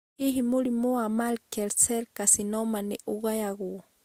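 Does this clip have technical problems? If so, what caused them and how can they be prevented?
Yes, throughout the speech there are two layers of compression artefacts heard together, likely from transcoding between lossy codecs, which fits Vorbis at around 45 kbit/s re-encoded as Opus at around 48 kbit/s. Unlike a single codec, Opus spends bits re-coding the Vorbis smearing and adds its own. The band extends to 20 kHz. To prevent it, encode once from the original source.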